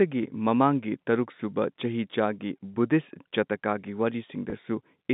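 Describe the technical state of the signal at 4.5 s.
Packet loss with pitch repetition at 4.50 to 4.52 s: about 20 ms went missing, fitting a single lost packet. The receiver bridged it by repeating the last pitch period, so the sound holds briefly with a slight buzz.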